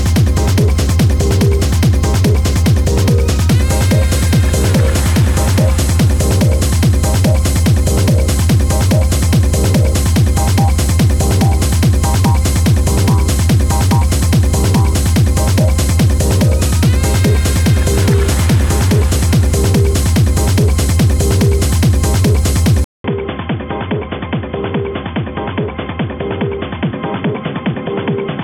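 At 22.84 s the sound drops out for 200 ms, then returns duller and quieter, roughly 10 dB down, with a new noise floor, likely from an input switched to a poorer device. The spectrogram shows a gap, then nothing above 3.5 kHz.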